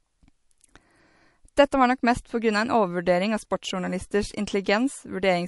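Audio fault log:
Throughout: MP3 compression. The speech has a plainly audible watery, swirling texture, and nothing reaches above 11.3 kHz, so the top octave is missing and sibilants sound dull and metallic. The likely cause is a low-bitrate MP3 encode, which fits about 48 kbps. With too few bits, the encoder cut the treble at a fixed frequency and dropped weak frequency lines that flicker on and off between frames, producing the swirl.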